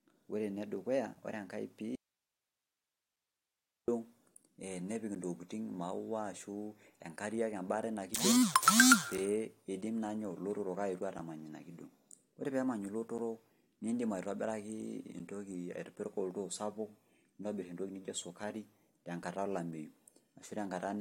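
At 1.15 s the speech is broken by a gap between stream segments, a hard-edged silent hole about 5 ms long. From 1.95 s to 3.88 s the speech cuts abruptly to hiss roughly 55 dB below its normal level: an audio dropout to a faint residue, likely a lost signal feeding a path that stayed live. On a waveform the envelope collapses to a thin noise band, and a spectrogram shows a flat, faint noise floor with square edges.

Further segment gaps fall at 3.16, 5.15, 7.17, 9.18, 11.19, 13.18 and 15.19 s, each 5 to 10 ms long. Their spacing of about 2 s fits segment boundaries whose timestamps leave a gap that the player fills with silence. Each appears as a brief flat line in the waveform and as a thin vertical blank stripe on a spectrogram.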